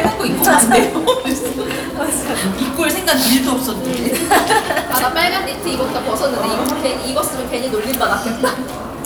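Everyday sounds, with no technical faults audible anywhere.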